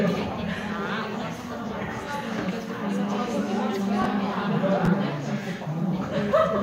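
Chunks out of order at 4.02 to 4.05 s and again at 4.85 to 4.88 s: a short block of audio, about 10.67 ms long, plays late, two blocks behind its place the first time and one block behind the second. Nothing goes missing, but the sequence is scrambled, leaving three abrupt joins each time, heard as a brief jumbled stutter in the sound.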